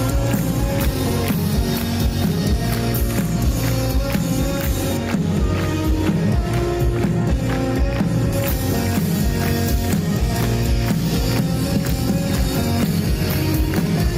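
Right from the start there's gain pumping: the level keeps ducking and recovering by around 5 dB as louder moments come and go, so loud and soft parts sit squashed together. That's likely input gain set too hot with a fast limiter or compressor clamping down.

From 4.97 to 8.33 s, de-emphasis is applied wrongly. A treble cut meant to undo pre-emphasis hits audio that didn't need it, so the top end slopes away to about 11 dB down at 10 kHz against 1 kHz. That stretch sounds dull and muffled.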